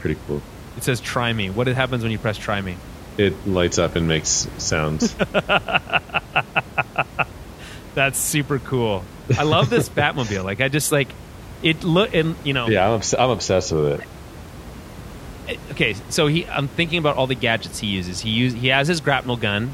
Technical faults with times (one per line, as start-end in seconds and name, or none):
none